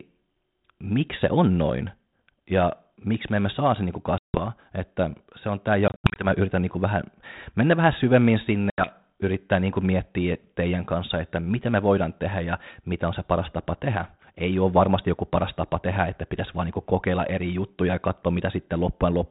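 Finnish speech over a G.726 ADPCM link, band-limited to 4 kHz with a light hiss consistent with 32 kbit/s, shows packet loss on an ADPCM call three times. About 160 ms goes silent at 4.18 s after "emme saa se niin". Another 160 ms, scattered in short gaps, falls at 5.88–6.27 s after "se on tämä". A further 80 ms drops at 8.70 s after "vähän mennä vähän syvemmin". Each appears as a silent, hard-edged gap in the waveform and a blank vertical stripe on the spectrogram. The decoder's predictor and step size lose sync with the sender's, so speech returns slightly distorted before settling.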